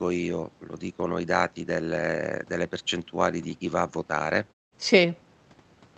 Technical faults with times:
none

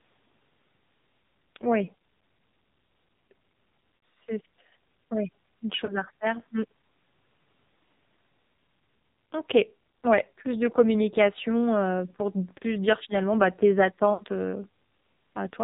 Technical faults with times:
0.00-15.63 AMR narrowband mobile codec
3.96-4.02 lost AMR speech frames
5.86-5.97 lost AMR speech frames
12.58-12.64 lost AMR speech frames
14.14-14.24 lost AMR speech frames

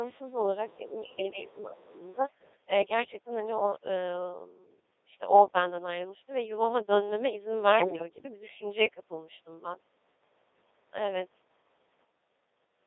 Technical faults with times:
0.00-12.86 Codec 2 vocoder
1.02-1.17 other side's voice leaking through
7.78-8.09 bit errors on digital voice radio

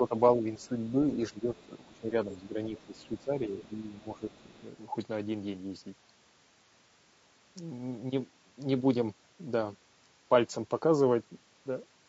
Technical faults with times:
0.00-12.08 low-delay AAC compression
0.00-4.64 speech suppressed in double talk
0.62-0.68 other side's voice leaking through
1.55-1.99 other side's voice leaking through
2.32-2.36 other side's voice leaking through
2.77-3.23 other side's voice leaking through
4.32-4.44 other side's voice leaking through

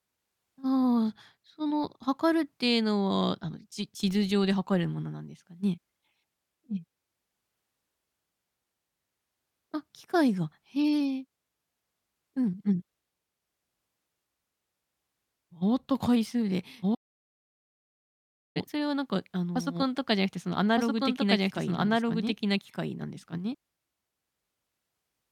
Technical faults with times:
16.82-23.55 doubled audio track
16.95-18.56 audio dropout to silence

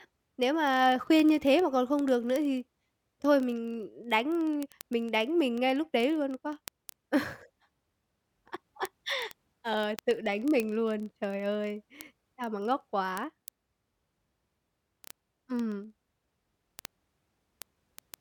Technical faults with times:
0.12-18.20 word clock ticks

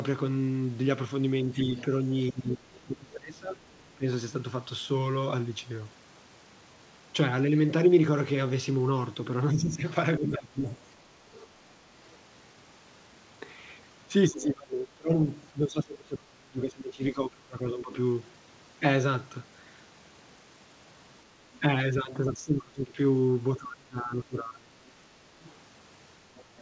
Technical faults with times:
1.52-4.04 speech suppressed in double talk
1.62-2.80 other side's voice leaking through
9.52-10.63 speech suppressed in double talk
10.66-12.15 other side's voice leaking through
14.28-17.94 speech suppressed in double talk
21.60-24.78 speech suppressed in double talk
25.43-26.61 other side's voice leaking through

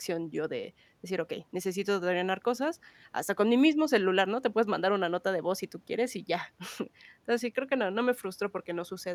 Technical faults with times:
none

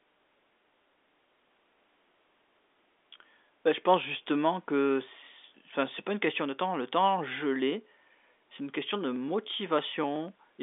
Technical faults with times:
8.79-10.53 periodic USB or driver dropouts

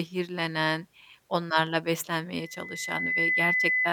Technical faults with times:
2.36-3.92 loudspeaker feedback squeal

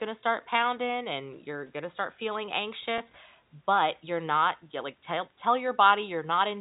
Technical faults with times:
2.98-3.00 packet loss with pitch repetition

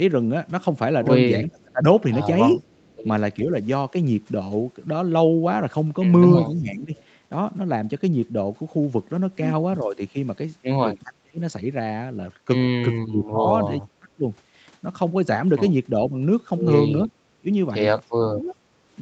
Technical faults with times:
1.45-3.39 speech suppressed in double talk
2.53-3.03 echo leak
2.71-2.86 background gated by the echo canceller
6.43-18.57 speech suppressed in double talk
6.97-7.04 echo leak
17.05-17.11 echo leak

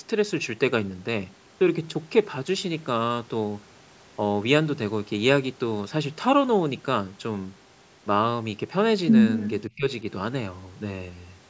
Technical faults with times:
9.69-9.86 speech suppressed in double talk

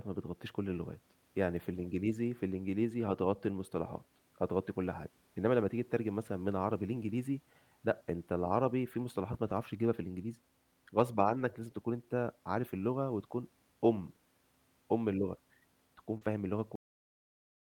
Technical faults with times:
8.99-9.01 lost packet rebuilt from error correction
11.17-11.39 lost packet rebuilt from error correction
16.17-16.23 short concealed packet loss
16.21 lost packet rebuilt from error correction
16.76-17.67 cut-off end

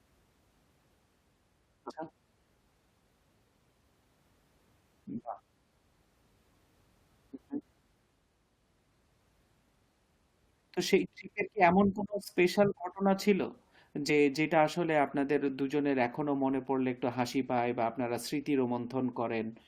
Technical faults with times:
1.89-1.91 compressed frames skipped
14.08 compressed frames skipped

